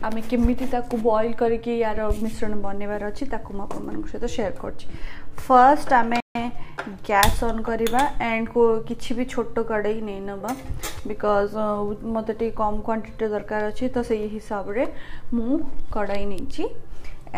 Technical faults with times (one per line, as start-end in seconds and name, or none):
6.20-6.35 playback stall